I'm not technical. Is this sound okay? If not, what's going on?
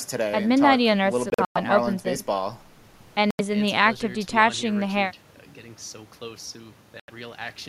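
No. The speech cuts out briefly three times. Around 1.3 to 1.57 s it breaks up into several short gaps, the longest about a tenth of a second. Shorter single gaps of about 85 ms follow at 3.31 and 7.00 s. Each time the speech picks up later, as if it kept playing during the silence. This sounds like a Bluetooth dropout, likely caused by the wireless link failing to deliver the sound to the headphones in time.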